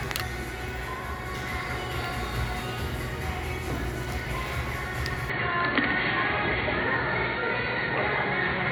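Input switched to a poorer device at 5.30 s, lasting to the end of the clip. With no gap at the changeover, the sound abruptly turns dull and boxy: nothing remains above 4.4 kHz, the level shifts by roughly 5 dB, and a new, faint background noise appears well below the signal. The likely cause is the recording input jumping mid-take to a narrower-band microphone or a headset's call profile, with its own tone and noise floor.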